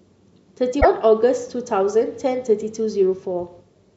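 Speech, with a brief corrupted glitch from 0.80 to 0.86 s where the audio jumps ahead. The likely cause is a broken MP3 bit reservoir: after missing frames, the next roughly two 26.1 ms frames decoded borrowed data from the wrong frame.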